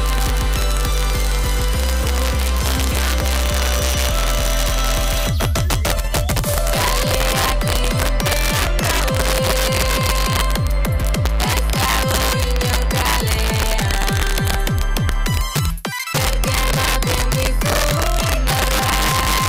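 Integer overflow throughout: with about 3 dB of overdrive, the loudest peaks, roughly one percent of samples, wrap to the opposite sign, producing harsh cracks far sharper than clipping.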